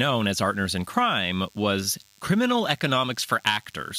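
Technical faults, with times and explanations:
Throughout, DECT cordless phone buzz: a steady buzz at 100 Hz with a stack of harmonics sits under the speech for the whole clip, about 35 dB below it. A DECT handset or base nearby is firing short radio bursts every 10 ms, and something in the audio path is rectifying them into sound. That 100 Hz repetition rate sets the fundamental, and the sharp edges of each burst create the harmonics above it.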